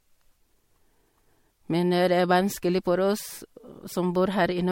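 Throughout the speech, the sound is swirly, smeared and hollow, and attacks blur. Nothing remains above 16.5 kHz. This is generation loss, likely from MP3 encoding repeated about three times, fitting 64 kbit/s. Each pass requantises on a shifted frame grid, compounding noise.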